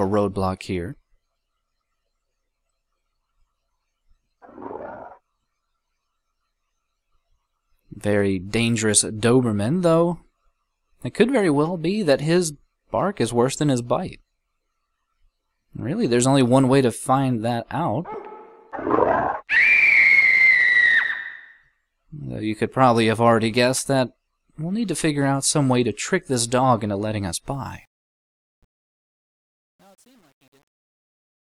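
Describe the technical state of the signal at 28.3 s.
At 28.3 s you're in truncation distortion on the fade-out (27.51 to 31.58 s, worst from 28.23 s). The undithered gain stage, which fits roughly 9 bits, steps the waveform, so it turns gritty.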